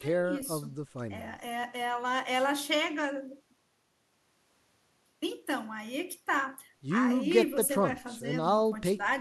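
No technical faults can be heard anywhere in the speech.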